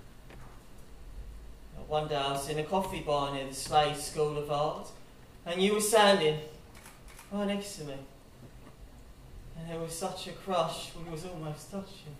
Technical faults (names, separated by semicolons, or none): none